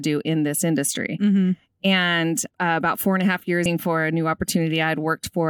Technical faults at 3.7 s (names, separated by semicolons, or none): stream segment skipped